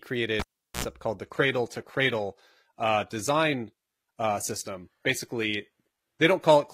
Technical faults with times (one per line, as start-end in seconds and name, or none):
0.40-0.84 cable pulled and plugged in
1.23-6.73 adaptive stream at a lower bitrate